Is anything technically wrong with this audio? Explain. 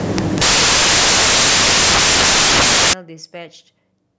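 Yes. From the start to 2.93 s, the speech is buried under samples built from the wrong bytes. The reader assembles each sample incorrectly, either shifted by a byte, in swapped order, or with the wrong alignment. The fast-changing low bits end up as the large part of every value. The result is loud, harsh broadband noise, close to white on the louder sounds. After 2.93 s the bytes line up and the speech is heard.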